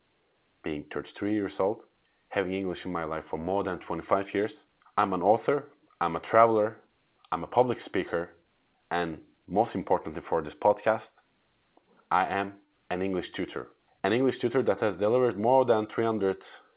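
No technical faults can be heard in the speech, which has passed through a call path whose band stops at 4 kHz, consistent with narrowband G.711 A-law telephone coding at 64 kbps.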